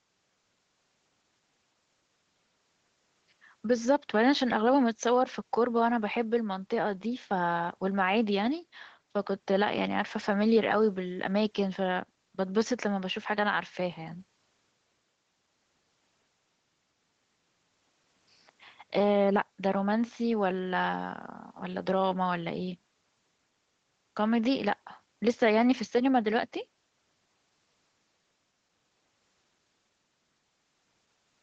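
No faults heard in the speech: content stops at 8 kHz and the lowest bass is rolled off, which fits normal call microphone processing feeding a WebRTC call path with Opus at around 24 kbps.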